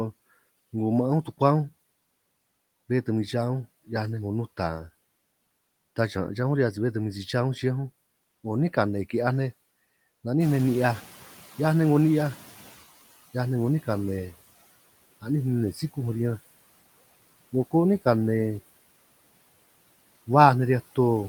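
Noise suppressor artifacts run through the whole clip: frame by frame, the suppressor pulls down every band it judges to be steady noise, by about 19 dB. The background sinks in the pauses and swells back under the speech.

Noise suppressor catching up from 10.4 to 12.86 s: the room noise jumps by about 14 dB at around 10.5 s, and the suppressor's noise estimate trails behind. The louder noise first comes through with only about 13 dB of reduction, then fades over roughly 2.5 s as the estimate adapts.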